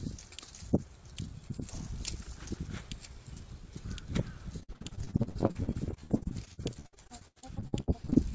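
From 4.6 s to 8.18 s there's repeated packet loss with that robotic, choppy character. Dozens of short holes, the longest 80 ms, each get patched by stretching the last bit of sound, so about a third of that stretch is concealment.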